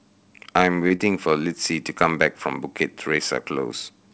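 Short concealed packet loss at 0.88, 0.96 and 1.99 s. Brief gaps, 20 to 40 ms, were filled by extending the preceding sound, heard as quick smears or wobbles. The band stops at 8 kHz, which fits a wideband call codec such as G.722.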